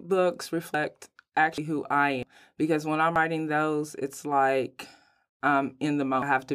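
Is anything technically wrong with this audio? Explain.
Yes. The speech jumps forward abruptly at 0.74, 1.58 (just before "who I"), 2.23, 3.16 and 6.22 s. Each jump has no silent gap. These are likely dropped buffers (overrun). Samples were overwritten before being collected, so roughly a tenth to a third of a second vanishes each time.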